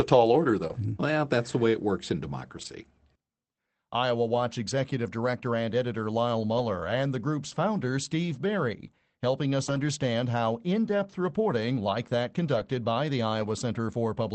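Speech carried over a WebRTC call path, band-limited to roughly 8 kHz in a way that fits Opus at around 24 kbps, with two kinds of packet-loss damage. A short concealed packet loss follows "tall order" at 0.67 to 0.71 s. About 20 ms of audio never arrived, and the decoder bridged it by extending the preceding sound before blending back, leaving a brief smear in place of the real signal. Lost packets rebuilt from error correction occur at 0.69–0.71 s, 2.57–2.67 s, 4.35–4.37 s, 6.57–6.59 s just before "and the group's founder", 9.67–9.81 s, 12.55–12.61 s and 13.41–13.43 s. Each spans 20 to 80 ms of rebuilt audio. There are no gaps because the following packet carried a low-bitrate copy, but those stretches sound rougher and noisier than the surrounding speech.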